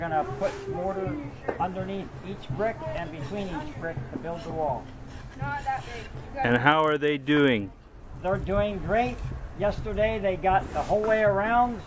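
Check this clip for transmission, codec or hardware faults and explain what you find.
There's one fault here. From 4.76 to 8.6 s, the resampler restarted on every block: each 40 ms chunk was converted separately, probably 24 kHz down to 16 kHz judging by the sound, leaving an edge error per block. That's a 25 Hz tick-buzz riding the signal.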